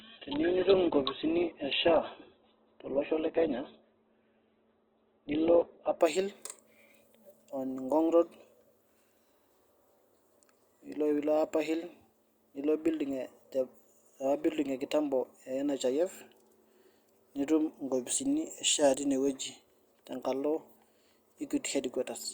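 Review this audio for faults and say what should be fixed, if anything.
The player began on a low-bitrate version of the stream, an adaptive stream starting at a low bitrate, until it had measured the connection. From 0 to 6.0 s the speech lacks everything above 4.4 kHz and carries heavier codec artefacts, which fits Opus at 8 kbit/s. It then jumps to full quality with no gap, consistent with a step up to 64 kbit/s. Starting on a higher-bitrate rendition, or measuring bandwidth before playback, would prevent this.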